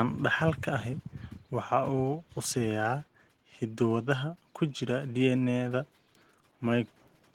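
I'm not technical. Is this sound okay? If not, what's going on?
Yes, nothing stood out as wrong when listening to this recording.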